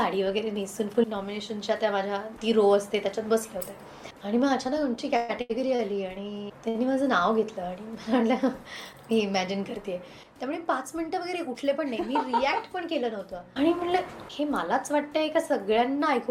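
The audio has three network-timing problems. From 4.95 to 5.81 s there's repeated stalls (stutter): packets kept arriving late, the jitter buffer ran dry four times, and the receiver stretched the last sound over 255 ms in total, longest gap 123 ms, about 30% of that stretch, so it drags without losing anything. Then at 6.69 to 6.77 s there's a short stall from a late packet: one packet showed up 58 ms late, so the sound just before it gets held that long before carrying on from the same spot. Finally, from 11.40 to 12.08 s there's a jitter buffer speed-up, where the receiver trimmed out roughly 50 ms in small pitch-period chunks to work off the extra buffered delay, so it runs at 107% speed, same pitch but noticeably hurried.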